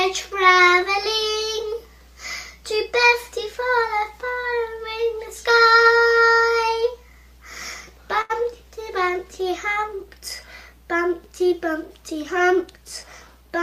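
A steady low tone runs under the whole recording, sitting roughly 25 dB below the wanted sound: this is mains hum at 60 Hz, the North American power frequency. It comes from a ground loop or a transformer close to the cabling letting the supply leak into the signal path. Between 8.21 and 8.32 s the sound briefly freezes: one moment is held on for about 82 ms, and then playback picks up exactly where it stopped. That is a short stall from a late packet. A packet was not there in time, so the receiver's jitter buffer ran dry and the decoder stretched the last sound to cover the gap. Nothing was lost, but from then on everything plays 82 ms later than before. From 12.12 to 13.29 s the audio runs noticeably faster, at about 107% of normal speed with the pitch unchanged, giving a hurried feel. This is a jitter buffer speed-up. With more audio queued than the buffer wants, the receiver repeatedly cut out tiny pitch-period slices, about a tenth of a second in total, to bring the delay back down.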